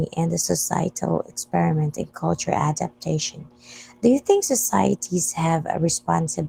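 From start to finish the speech carries Opus voice compression, and the damage is plainly audible. The band still reaches fullband, with the low end handled by the linear-prediction coder and a thin transform layer filling in above 8 kHz, but the excitation is coded coarsely. The result is a hoarse, faintly robotic edge. That all fits a hybrid-mode stream at roughly 16 kbps in 20 ms frames.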